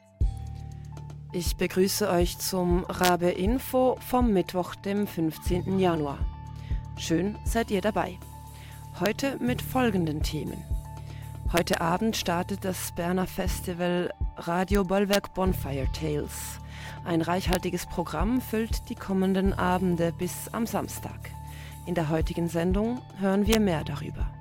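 The audio has integer overflow on its loudest peaks. Violent, sharp cracks occur at 3.04–3.09 s, 9.06 s, 11.57–11.74 s, 14.75 s, 15.13–15.15 s, 17.53–17.55 s and 23.53–23.55 s. The level pushes only slightly past full scale, by about 0 to 3 dB. The longest and harshest burst is at 11.57 s. Instead of being held at the limit, each over-range sample wraps around to the opposite sign. The waveform jumps across the whole range. That is why these sound far harsher than clipping.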